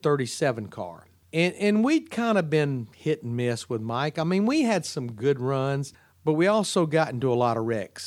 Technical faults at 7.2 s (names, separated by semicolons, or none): none